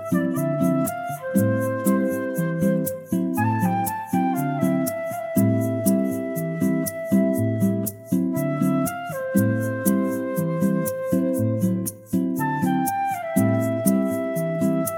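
No technical faults can be heard anywhere in this audio.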